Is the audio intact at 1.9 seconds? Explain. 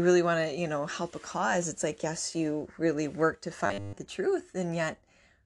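Yes, the speech at 1.9 seconds is intact, with no dropout, click, distortion or other fault at that moment.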